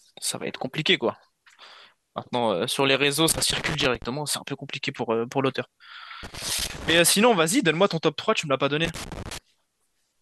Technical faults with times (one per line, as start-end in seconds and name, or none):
3.29-4.04 loose connector crackle
6.23-6.99 loose connector crackle
8.85-9.38 loose connector crackle